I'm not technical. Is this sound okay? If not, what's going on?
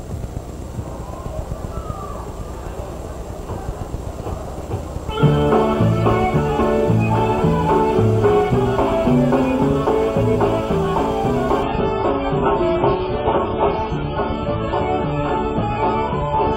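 No, not all the way through. At 11.63 s the quality suddenly drops and stays low to the end, with no gap or pause. That's an adaptive stream at a lower bitrate: the connection slowed, so the player quietly switched to a much smaller, lower-quality version of the same audio. Everything above about 7.6 kHz is gone, so the sound turns dull and muffled, with a smeared, watery edge to it.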